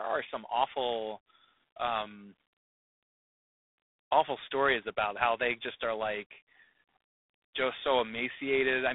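G.726 ADPCM coding runs through the whole speech clip. The codec sends only a few bits per sample, coding the difference from an adaptive prediction. The harshness heard fits the 24 kbit/s rate, or 3 bits a sample. Too few steps leave coarse quantisation noise. It is a plainly audible rasping hiss that rises and falls with the speech level. The band is telephone-narrow, about 250 Hz to 3.6 kHz. Nothing passes above 3.8 kHz.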